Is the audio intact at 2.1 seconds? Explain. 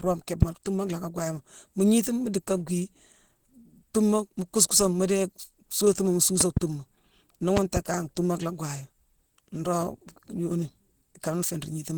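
No. At 2.1 s, as throughout the clip, the speech has likely been through Opus compression at a low rate that fits about 16 kbps. The encoder is running in its hybrid speech mode, which leaves the speech plainly muffled, hoarse and grainy.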